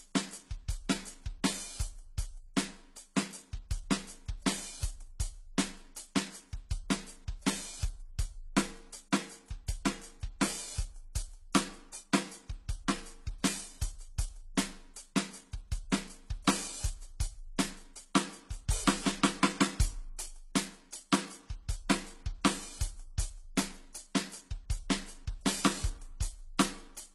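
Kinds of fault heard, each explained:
Transcoding between lossy codecs: the music sounds like it was encoded with one lossy codec and then re-encoded with another, likely an AAC-LC stage at a low bitrate followed by HE-AAC at a lower one. Nothing is present above 12.8 kHz, and that ceiling holds for the whole clip. The second encoder spends its limited bits reproducing the first encoder's artefacts and then adds its own, so both sets of artefacts are heard together throughout.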